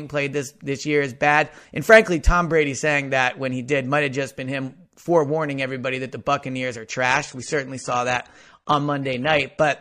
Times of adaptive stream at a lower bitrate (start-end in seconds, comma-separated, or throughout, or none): 7.10-9.80